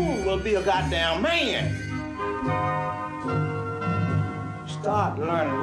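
At 2.00 s the sound shows a digital radio blending to analogue. The receiver lost its digital signal and cross-faded to the station's FM broadcast. The fade takes about 0.22 s. Once on FM, a faint hiss appears, roughly 40 dB below the signal. The level shifts by about 1 dB. At 5.00 s the receiver blends back to digital, and the hiss goes.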